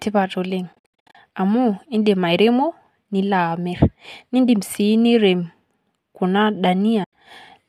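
From 0.73 to 1.15 s the speech breaks into soft-edged gaps, AAC frame loss with muting: the decoder zeroed lost frames, about 340 ms across 420 ms, longest run about 70 ms, with overlapping windows fading each hole in and out. A single 90 ms hole follows at 7.04 s. The light graininess throughout is likely from low-delay AAC at 64 kbps.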